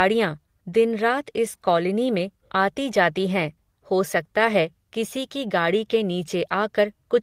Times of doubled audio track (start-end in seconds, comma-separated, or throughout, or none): none